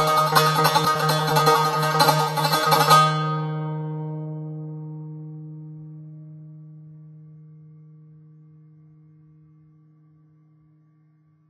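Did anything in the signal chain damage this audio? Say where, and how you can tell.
Yes, at the codec stage, and it's on the music for the whole clip. Nothing comes through above 14.2 kHz, and the treble that's left sounds hissy and grainy, with a roughened edge on sustained tones and smeared attacks. That's likely Vorbis compression: the encoder keeps a smooth spectral envelope but quantises the high-frequency detail so coarsely it turns into noise-like fizz. The damage is plainly audible, which points to a very low bitrate, around 19 kbps.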